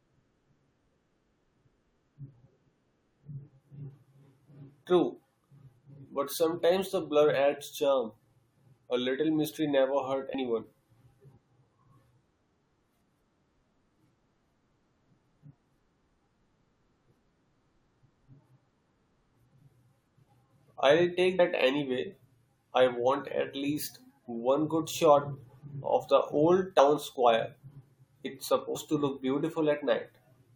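Compressed frames are skipped four times, at 10.33, 21.38, 26.78 and 28.74 s. Whole 21.3 ms frames never play, so the speech jumps ahead by about a tenth of a second each time, and by less at 26.78 s.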